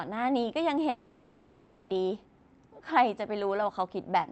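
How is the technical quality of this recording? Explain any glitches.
The recording has one clear glitch, a long network dropout, from 0.89 s to 1.91 s. For about a second the sound stops moving forward. The last fragment is stretched into a buzzy, hissing continuation and never drops to true silence. When the audio resumes, it jumps ahead, and that second is simply gone. The likely cause is a stall in packet delivery: the receiver filled the gap by extending what it had last heard, then picked up later material once packets arrived again. A brief packet-loss blip lasts only tens of milliseconds, and a plain mute leaves a silent hole. This one is a full second long and concealed throughout. The band tops out around 8 kHz, which fits the Opus call path it travelled through.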